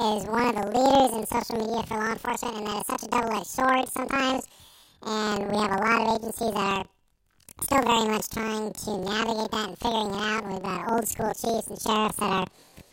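Planar audio read as interleaved runs throughout: each 46.44 ms block, whose length fits a 2048-sample block, is read as alternating pairs, so its left half and right half each play at double speed. The speech sits a full octave high, fluttering at 21.5 Hz.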